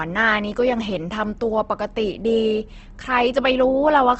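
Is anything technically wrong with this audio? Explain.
Yes. Opus compression damage runs through the whole speech clip. Nothing is heard above 8.2 kHz. The speech has a rough, grainy edge. The likely cause is an Opus encoder short of bits, which fits a rate near 16 kbps. It fills starved bands with folded or noise-like energy rather than leaving gaps.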